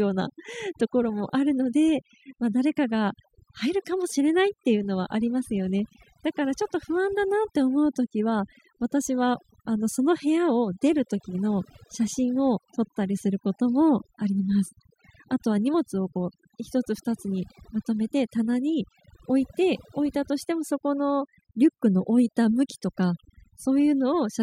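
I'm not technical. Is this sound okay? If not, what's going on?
No. Overdone noise removal runs through the whole clip: the background drops and breaks into twinkling, warbling specks, and quiet parts of the speech get cut away with it.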